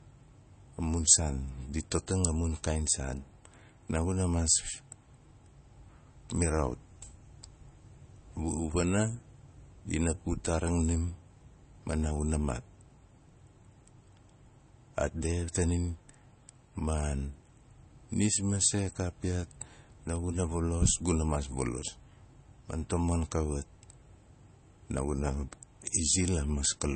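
Throughout the speech, the encoder has likely run short of bits under MP3 compression. The damage is plainly audible and points to a low rate around 32 kbps. To save data it has cut the treble outright, leaving nothing above about 8.3 kHz, and dropped weak frequency lines that flicker on and off between frames. The speech sounds dull and watery, with a swirling, metallic edge on s sounds and smeared consonant onsets.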